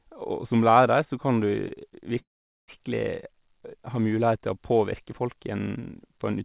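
At 1.68 to 1.72 s comes a short stall from a late packet: the last sound is held for about 20 ms, then resumes, so the speech loses nothing. At 2.19 to 2.70 s a call audio freeze, likely from packets held up in transit, leaves a fading buzz and then about 420 ms of silence before the speech carries on, nothing lost. That makes it a delay rather than a dropout, heard through narrowband audio with nothing above 4 kHz.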